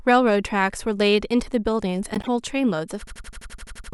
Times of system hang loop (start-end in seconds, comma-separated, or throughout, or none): 3.07-3.93